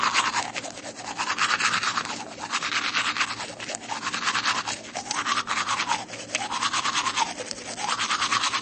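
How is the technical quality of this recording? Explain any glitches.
The technical quality is poor, with one fault present throughout.

Across the whole clip the sound is dull and watery, with nothing above 8.3 kHz. This likely comes from MP3 compression starved of bits, fitting roughly 34 kbps, dropping treble and weak frequency lines.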